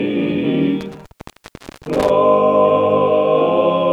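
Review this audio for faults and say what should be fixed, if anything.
An intermittent contact, a loose cable or plug, opened the signal path between 0.81 s and 2.10 s, leaving it open for about 0.80 s in total. The audio breaks up and drops out across that span, with crackle where the connection makes and breaks. To prevent it, reseat or replace the suspect cable and connectors, and secure them with strain relief before recording.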